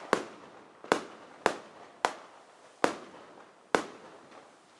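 Nothing goes wrong anywhere in this recording; the sound carries on from beginning to end without a single technical fault to point at.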